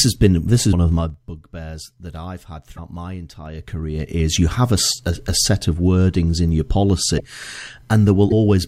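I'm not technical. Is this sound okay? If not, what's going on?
No. There are two kinds of fault in this speech clip.

Zipper noise: at 0.9 to 1.25 s the volume drops, and at 3.40 to 4.37 s, just before "you have a a", it rises. Instead of gliding, it moves in small jumps, about 20 a second and then about 7 a second. Each jump ticks, so the sound zips.

Broken MP3 bit reservoir: at 2.76, 4.90 (between "you have a" and "a a set of"), 7.17 (after "of wordings in your") and 8.30 s, the audio skips forward with a brief chirp, noise burst or gap. The likely cause is missing pieces of an MP3 file, leaving the next piece without data it borrowed from earlier.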